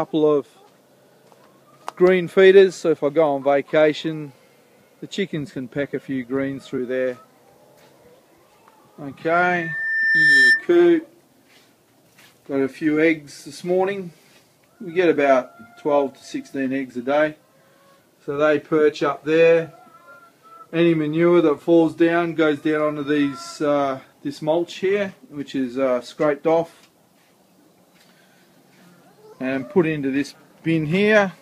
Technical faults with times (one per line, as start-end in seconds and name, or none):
9.28-10.68 loudspeaker feedback squeal